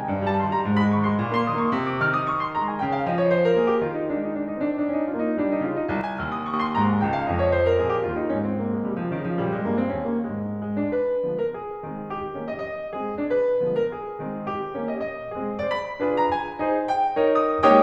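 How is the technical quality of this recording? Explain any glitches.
The music has one clear glitch. From 6.01 to 6.54 s the level suddenly sags by about 6 dB for roughly half a second before returning. This is likely one channel dropping out: with one stereo side gone, shared material loses half its level, and anything carried only on that side vanishes.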